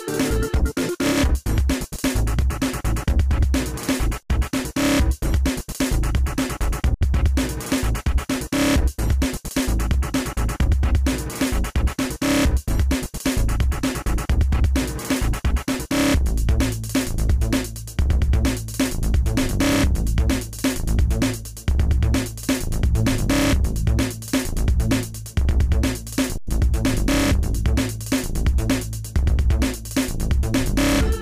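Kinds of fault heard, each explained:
Underrun with held sample, at 4.23 to 4.30 s, 6.94 to 7.01 s and 26.38 to 26.47 s: the output buffer ran dry, so the converter held its last value and the waveform sat flat, likely off zero, for about 70 ms twice and then about 93 ms, which fits a 4096-sample buffer. The sound briefly freezes without a sharp click, and because nothing was lost, playback resumes where it stopped, so each restart is soft.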